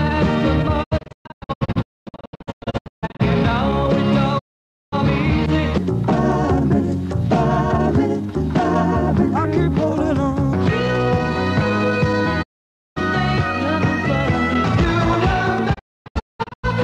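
The receiver repeatedly lost the digital signal or rejected corrupt frames and muted, a digital broadcast dropout. The audio fades out within 20 ms into silent holes, scattered across 0.82 to 3.21 s and 15.73 to 16.65 s and single at 4.37 to 4.94 s and 12.41 to 12.98 s, and the missing audio never returns.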